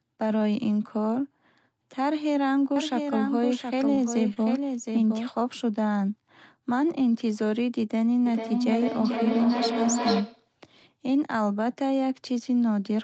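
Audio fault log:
2.76–5.29 s, doubled audio track. A second copy of the speech runs about 0.7 s behind the first, roughly 5 dB quieter. It is full-band and has no room colour or decay, so it sounds like a detached duplicate rather than a reflection. It starts and stops abruptly at the edges of this span. The likely cause is a second, slower capture path feeding the same mix, or an edit that left two out-of-step copies.
3.95–4.00 s, short stall from a late packet. A packet arrived late and the jitter buffer ran dry. The receiver held the last sound for about 29 ms until the data came in, then carried on from the same point. Nothing is lost, but the sound lingers slightly too long, with a faint buzz or dip. Playback runs about 29 ms later from here on.
4.34–4.38 s, short concealed packet loss. About 20 ms of audio never reached the decoder. The receiver covered the gap with roughly 24 ms of synthesised continuation, carrying the preceding sound forward before blending back into the real signal. 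The result is a brief smear or wobble. A short consonant at this point may be weakened or gone, because the fill only extends what came before.
8.26–10.56 s, feedback echo between two devices. Speech comes back at a steady interval of about 0.4 s. It sounds thinner and more ringing each time round. The loudest return is only about 2 dB below the direct speech. One device is replaying another's microphone in the same room, and neither echo canceller removes sound played by the other device.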